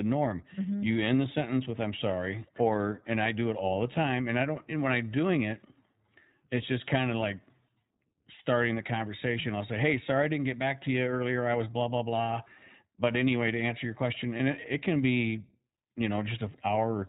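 iLBC codec, throughout the clip: the speech has been through narrowband VoIP coding. Nothing survives above 4 kHz, so sibilants lose their edge and the speech sounds boxed in. Each short frame's excitation is coded on its own, which leaves a plainly audible rough, slightly synthetic texture on voiced sounds. The 20 ms framing and the quality level point to iLBC's 15.2 kbps mode.

Lost iLBC frames, from 14.38 to 14.40 s, right after "to answer your question" and just before "it it can be": a packet went missing and the decoder filled the gap by repeating the last pitch cycle blended with noise. The result is a brief held, faintly buzzy vowel-like smear, short enough to fit a single lost 20 ms frame. Because iLBC frames are independent, the speech snaps back cleanly on the next frame.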